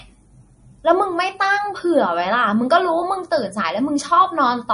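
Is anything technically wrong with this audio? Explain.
Yes. Throughout the speech there is plainly audible damage, likely from MP3 compression at a low bitrate, around 40 kbps. The treble stops sharply at about 10.6 kHz, and weak frequency detail flickers on and off between frames, giving a watery, swirly texture with metallic chirps on s sounds.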